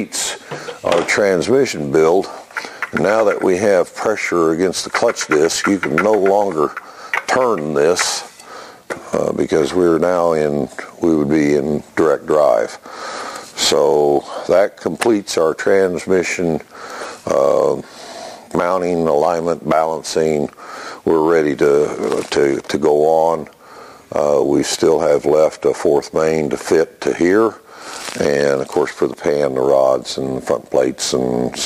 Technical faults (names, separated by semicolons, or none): crude rate conversion